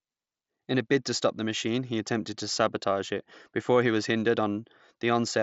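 No technical faults are present.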